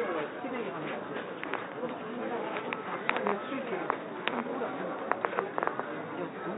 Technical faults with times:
none

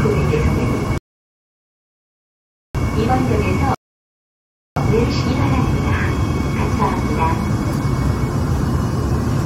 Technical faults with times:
0.98-2.75 rebuffering stall
3.75-4.76 rebuffering stall

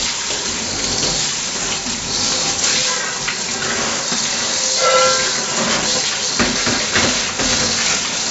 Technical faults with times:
0.00-8.31 4-bit ADPCM compression

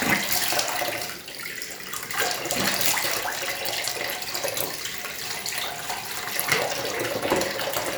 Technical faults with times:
none

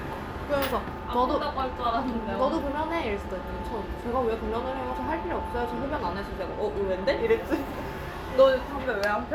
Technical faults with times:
none

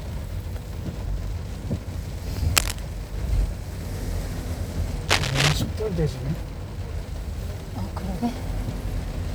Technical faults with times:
2.56-2.79 cable scratch noise
5.08-5.56 cable scratch noise

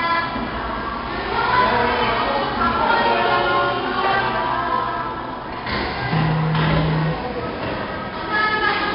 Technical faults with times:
0.00-8.95 4-bit ADPCM compression

